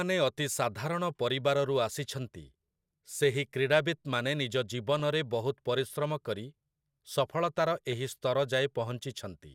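Speech, with two short bursts of DAB burbling: a tiny blip at 4.99 s and a slightly longer one from 7.91 to 7.93 s. Each sounds like a few brief watery blips over the speech, short blips of noise in single sub-bands. That's weak reception letting bit errors slip past the error correction into the MP2 data, corrupting samples across what sounds like a couple of frames. It fits a bit error rate of a few tenths of a percent.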